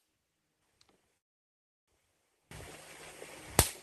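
From 0.0 to 2.51 s the sound collapses by about 28 dB, leaving a faint residue, likely one channel inverted, so the shared content cancels when the channels sum to mono. Between 1.17 and 1.90 s a call audio freeze drops everything into about 0.7 s of silence, likely a starved jitter buffer, after which the audio resumes where it stopped, delayed rather than lost.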